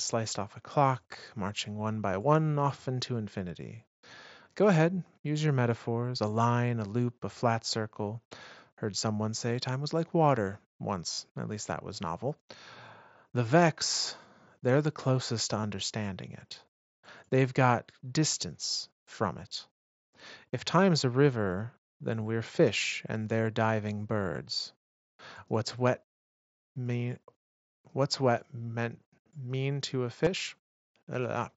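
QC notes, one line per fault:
11.12–11.18 s, 15.61–15.64 s, 30.24–30.27 s: concealed Bluetooth headset packet loss. Lost packets (a 45 ms run first) are filled by repeating recent waveform, giving a buzzy held tone. This shows as identical repeating cycles at flat level and evenly spaced spectrogram striations, then a slight warble at recovery.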